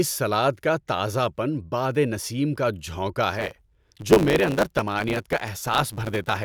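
At 3.32 s, just after "بادِ نسیم کا جھونکا", a block size mismatch (truncated) begins and runs to the end. Each block loses its tail before the next stage reads it. A 100 Hz buzz follows the block rate. The speech runs about 1.09 times faster, with its timbre unchanged.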